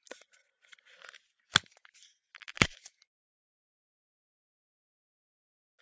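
A steady 50 Hz buzz runs under the sound for the whole clip and follows the signal, vanishing whenever the audio goes quiet. The cause is a resampler restarted on every block. The buzz fits a conversion from 48 kHz down to 16 kHz done in separate 20 ms blocks. Each block was converted without the samples on either side. So every block boundary gets a small error. Fifty such errors per second fuse into a buzz rather than separate ticks.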